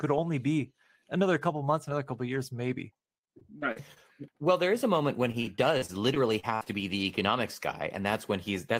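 Repeated packet loss (robotic sound) hits the speech from 3.39 to 3.98 s and again from 5.32 to 6.67 s. Short dropouts, up to about 55 ms, were bridged by repeating the preceding sound, giving choppy speech with pieces missing. A spectrogram shows smeared, frozen harmonic patches and abrupt breaks.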